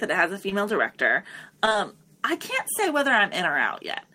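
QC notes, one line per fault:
0.49–0.54 s: short concealed packet loss. A brief smear just after "it has a". About 20 ms of the stream failed to arrive in time, so the receiver stretched the preceding sound over roughly 16 ms before blending back into the real signal, adding a few milliseconds of lag.
1.65–1.78 s: short concealed packet loss, three overlapping gaps just before "I can't say whether". This is heard as a wobbly, smeared stretch. Each time about 20 ms went missing, and 14 to 18 ms was patched by continuing the last pitch or shaped noise. Together they add around 10 ms of delay.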